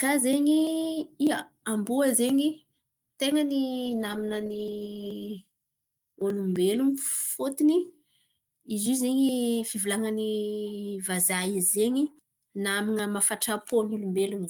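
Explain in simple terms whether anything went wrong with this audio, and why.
Between 3.87 and 6.19 seconds the speech sounds rough and less clear. That is a call bitrate drop: the connection sent fewer bits, losing detail.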